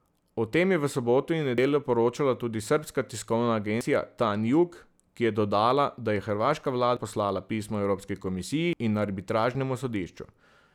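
At 1.58, 3.81, 6.97 and 8.73 s the speech jumps, skipping about a tenth of a second (nearer a fifth at 8.73), likely a dropped buffer (overrun).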